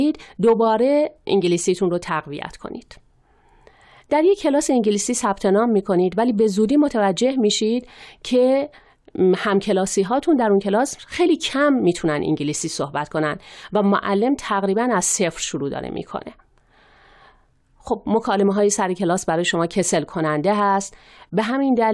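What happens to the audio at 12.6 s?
Nothing goes wrong at 12.6 s; the speech carries on intact through that moment with no audible fault.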